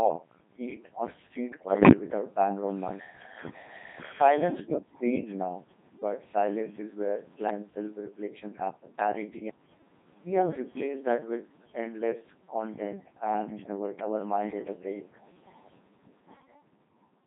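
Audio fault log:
Throughout: Codec 2 vocoder. The speech is rebuilt from pitch, voicing, energy and a spectral envelope at 2.4 kbit/s, so the voice sounds heavily robotic and buzzy. Unlike ordinary low-bitrate coding, the waveform itself is gone, and it is replaced by synthetic sine tones.
1.48–1.92 s: bit errors on digital voice radio. Flipped bits corrupt whole vocoder frames, so pitch, level and tone colour jump erratically into warbling gibberish. That suits a burst of errors at a rate of a few percent. A steady codec sound wouldn't jump about like this.
5.22–5.29 s: speech suppressed in double talk. For about 70 ms the voice dips by a few decibels and then recovers. The likely cause is an echo canceller turning the talker down while the far side spoke. It is a brief level duck, not a garble.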